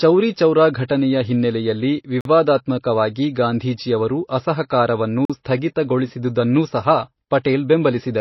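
From start to finish the speech sounds watery and swirly, with smeared consonant attacks, consistent with likely MP3 compression at a low bitrate around 24 kbps. A spectrogram shows a hard ceiling with nothing above 5.8 kHz, and the treble below it breaks into flickering, blotchy patches.

At 2.21 s and again at 5.25 s the sound drops out for 44 ms, a gap between chunks where successive 3 s blocks were joined with silence between them. Each is a short, hard-edged hole, seen as a flat, near-silent line in the waveform and a clean vertical stripe across the spectrogram.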